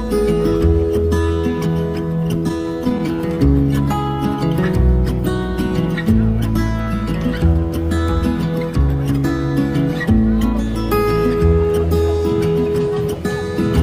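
Between 2.39 and 3.39 s the sound drags and stutters through repeated stalls: packets arrived late, the jitter buffer kept emptying, and brief gaps of up to 13 ms were bridged by continuing the last sound.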